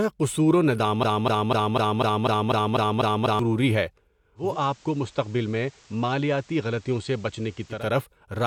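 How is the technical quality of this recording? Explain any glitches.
The recording has two faults, a stuck loop and a switch to analogue radio.

Broken-record loop, 1.03 to 3.39 s, right after "قصور و": a 248 ms fragment repeats ten times back to back, likely from a stalled player or stream, and the audio for that stretch is lost.

Digital radio blending to analogue, 4.35 to 7.89 s: the receiver cross-fades over 217 ms to the FM broadcast. The level drops about 3 dB, and hiss appears roughly 30 dB down.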